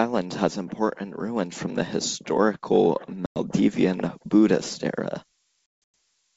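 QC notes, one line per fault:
3.26–3.39 s and 5.66–5.94 s, packet loss on an ADPCM call: the first gap drops about 100 ms of audio, which points to roughly five lost packets. The second drops 260 ms spread over 280 ms, with its longest silent stretch at 160 ms, which points to around fifteen packets. Each gap is a hard-edged hole of silence. Because ADPCM sends only differences from a running prediction, the receiving decoder's predictor and step size lose track of the sender's during the gap. Speech comes back slightly distorted until the two resynchronise tens of milliseconds later.
3.84–6.36 s, switching supply whistle: a high, thin whistle centred near 15 kHz, at roughly 20 dB below the speech, runs to the end of the clip. Its pitch wanders between 14.5 and 17.8 kHz. This behaviour fits a switching regulator running in an audible burst mode or beating against a second supply, with the frequency shifting as the load on the supply changes.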